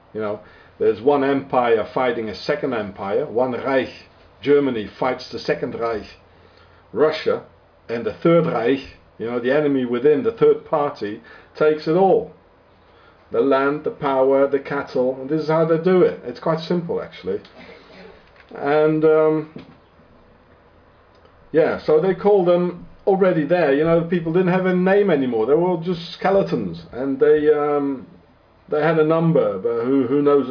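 No technical faults can be heard anywhere in the clip. At no point does the sound depart from what came before it.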